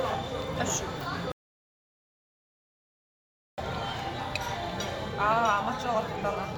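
At 1.32 s the sound cuts off abruptly and does not return until 3.58 s. This is an audio dropout to silence. The gap is silent, with no background left. About 2.26 s of sound is missing. The likely cause is a lost input while recording continued.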